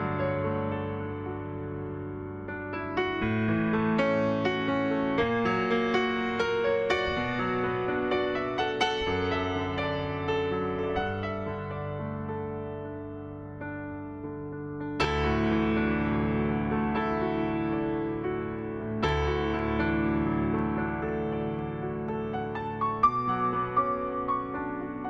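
At 15.04 s a single Bluetooth LE Audio frame went missing, about 10 ms of audio, and the LC3 decoder concealed it by reusing the previous spectrum with randomised signs. The result is a brief, noisy smear where any tonal content momentarily loses its clarity.

From 18.59 s to 22.09 s, something blocking the USB bus or audio driver every 0.5 s causes periodic USB or driver dropouts: about seven times, a tiny fraction of a millisecond of samples is skipped outright, leaving evenly spaced ticks in the sound.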